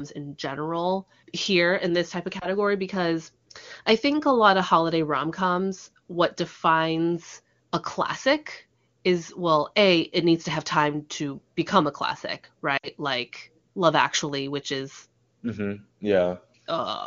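Lost AMR speech frames at 2.39–2.47 s (a brief warble, consistent with one lost frame) and 12.78–12.88 s (a longer gap that drops to near silence, suggesting about three frames) leave the decoder extrapolating with falling gain.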